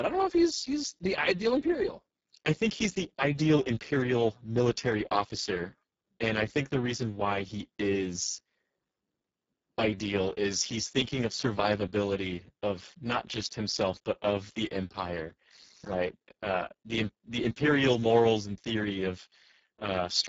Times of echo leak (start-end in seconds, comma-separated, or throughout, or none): none